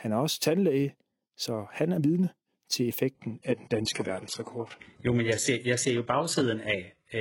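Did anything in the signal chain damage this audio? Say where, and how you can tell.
Yes, at the network stage: from 3.15 s the speech abruptly thins, losing everything above 11.5 kHz with no gap. That's an adaptive stream at a lower bitrate, which fits a drop to a low-rate HE-AAC stream.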